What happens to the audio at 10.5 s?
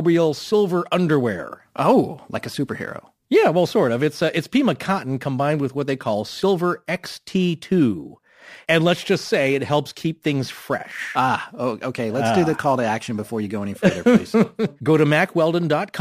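Crude rate conversion is present at 10.5 s, as it is throughout the clip. The speech went from 48 kHz to 44.1 kHz by nearest-sample picking, with no filtering. The repeating timing error adds an inharmonic, gritty fizz roughly 30 dB down that follows loud and high sounds.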